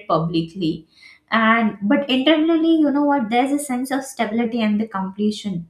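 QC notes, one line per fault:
2.43 to 4.46 s, drift correction step: the speech abruptly runs about 5.6% fast and sits roughly 94 cents sharp, close to a semitone, then drops straight back to normal speed and pitch. Tempo and pitch move together, likely because a clock-matching resampler changed its playback rate in a single jump to rebalance its buffer. Unlike wow or flutter, the shift is a steady offset with sharp edges rather than a gradual or wavering bend.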